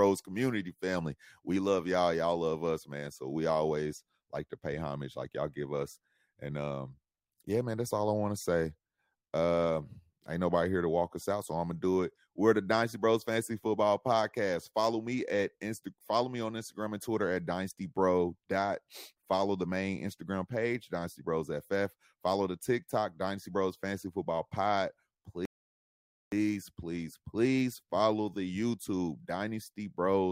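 A speech recording with a single rebuffering stall from 25.45 s to 26.32 s. The audio drops to silence for about 0.87 s, then picks up exactly where it left off, just before "please please follow", with nothing skipped or repeated. This is the pattern of a streaming player emptying its download buffer and pausing until more data arrives: no content is lost, but the stall adds that gap to the running time.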